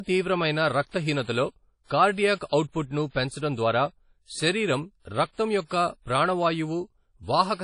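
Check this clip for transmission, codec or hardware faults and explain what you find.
One codec fault runs through the whole speech recording.

WMA compression, present from start to end, is the likely cause of the damage. A transform codec like this spreads quantisation error across long blocks and discards weak spectral detail when bits are scarce. Here nothing survives above about 10.1 kHz, and the artefacts are plainly audible, consistent with a bitrate around 32 kbps. The speech sounds washy and ringing, with a dull top end and a hiss that swells and fades with the voice.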